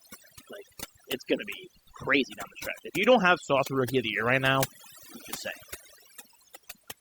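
Right through the clip there's overdone noise removal: the denoiser was pushed so hard it dropped whole frequency bands sitting near its noise estimate, taking quieter parts of the speech with them. So the background drops and breaks up into twinkling specks.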